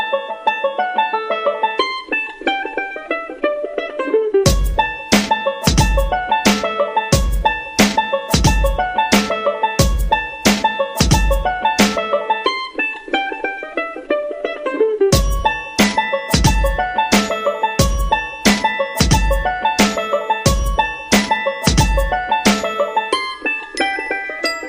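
Nothing technically wrong is audible anywhere in the clip.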